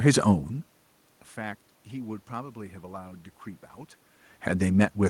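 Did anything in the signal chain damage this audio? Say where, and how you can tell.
No, nothing in the signal chain damaged this audio.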